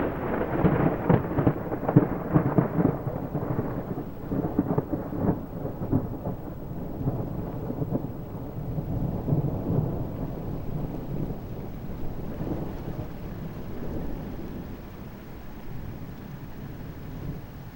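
Video or display buzz runs through the whole clip. A screen or video cable is leaking into the audio path. It makes a low buzz at 59.94 Hz, the picture's field rate, with hash above it. A thin whine at 15.7 kHz marks the line rate. It sits roughly 30 dB under the sound.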